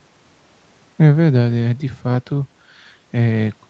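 No faults are audible: the speech carries the ordinary signature of call microphone processing, with the lowest bass trimmed by its high-pass filter and no content above 8 kHz, which is expected for that path.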